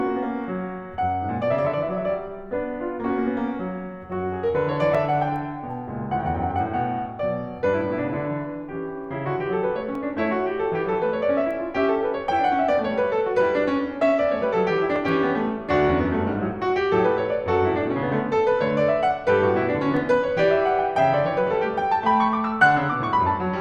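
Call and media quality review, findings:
Overlapping chunks in the music: short click or stutter at 4.95, 9.95, 14.96 and 19.97 s, spacing a steady 5.0 s. Probable component: chunked processing or transport stage. Mechanism: each 5.0 s chunk begins about 6.5 ms before the previous one ends, so that slice plays twice at every join. Distinguished from a dropout by duplicated material with no silent gap, and from random glitching by the exact 5 s period.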